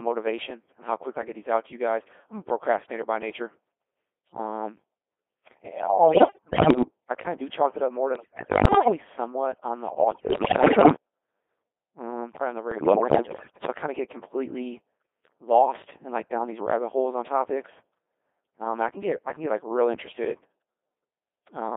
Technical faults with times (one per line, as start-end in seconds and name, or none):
0.00-21.76 Codec 2 vocoder
6.08-6.81 bit errors on digital voice radio
8.15-8.97 bit errors on digital voice radio
10.11-10.95 bit errors on digital voice radio
12.71-13.65 bit errors on digital voice radio